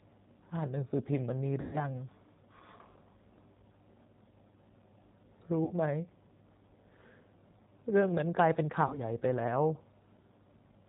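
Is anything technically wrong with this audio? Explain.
Yes. The speech has two faults.

Throughout, the G.729 codec is plainly audible. It rebuilds the voice from a vocal tract filter, a pitch predictor and a few pulses per frame. Nothing above 4 kHz survives. The speech sounds rough and synthetic, which fits an 8 kbit/s G.729A stream.

VoIP packet loss concealed by the speech codec occurs at 1.61 to 1.78 s, 5.65 to 5.73 s and 8.87 to 8.98 s. The decoder stretches its last pitch and filter while lowering the gain. Each gap turns into a buzzy tone or a coloured noise that fades. The first is longest, fitting about four lost packets. The others fit one each.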